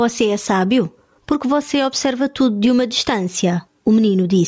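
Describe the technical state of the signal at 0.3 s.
At 0.3 s the speech shows gain pumping, present throughout the clip: the gain is pulled down on each loud sound, swinging roughly 15 dB, so loud and soft parts end up closer in level and the sound is squashed. The likely cause is excessive input gain driving a fast limiter.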